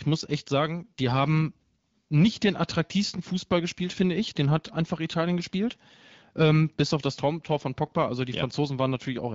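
No faults to report in this speech; it is carried over an AMR wideband (HD Voice) link at 12.65 kbit/s, the codec's band extending to 7 kHz, with the only trace of it being the light coding texture expected at that rate.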